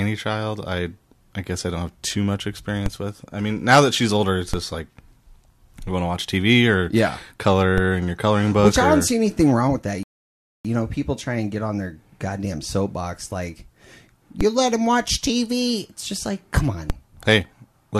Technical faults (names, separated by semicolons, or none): DC step; rebuffering stall